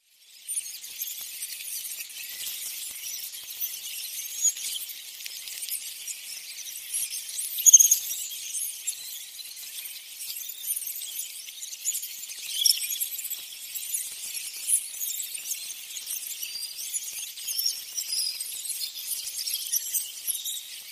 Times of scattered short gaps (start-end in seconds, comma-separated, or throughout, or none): 0.77-20.45